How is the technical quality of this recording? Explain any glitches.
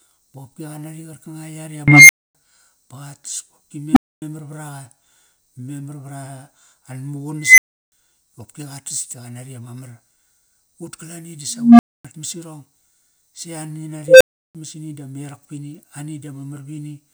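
The speech is interrupted five times by an unstable filter: at 1.88, 3.93, 7.40, 11.50 and 14.08 s, a tone of around 2 kHz, 300 Hz, 2 kHz, 200 Hz and 500 Hz swells over 38 to 292 ms into a loud, clipped squeal or beep, then drops out for 256 or 341 ms. A recursive filter fed bad coefficients lets its output grow until the numbers overflow and the signal goes silent until the filter resets.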